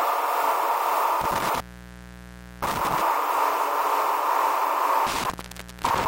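An intermittent contact drops the signal twice, between 1.21 and 3.01 s and between 5.07 and 6.06 s. A loose connection opens for about 1.02 s and then 0.54 s, so the audio cuts out with crackle at each edge and faint hiss remains.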